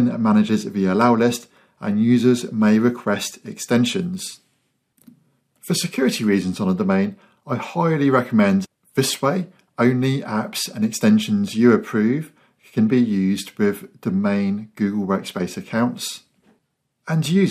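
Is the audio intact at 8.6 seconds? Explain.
No. A stream segment skipped at 8.64 to 8.66 s: the sound jumps abruptly ahead with a brief blip at the join, as if part of the programme is simply missing. The likely cause is a segment that failed to load, with playback continuing from the next one.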